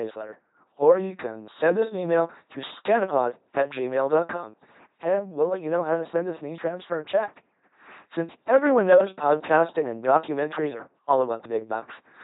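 LPC-10 vocoder damage runs throughout this speech clip: each moment is synthesised as all buzz or all hiss through a ten-pole filter, heavy enough to fit 2.4 kbit/s, with nothing above 3.9 kHz.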